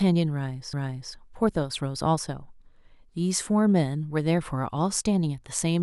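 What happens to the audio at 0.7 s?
At 0.73 s there's a CD skip: a knock or a flaw made the laser jump onto a different turn of the disc's spiral, so the player mutes for just a few milliseconds. You hear a tick, then the speech carries on from another spot, jumped by whole disc turns.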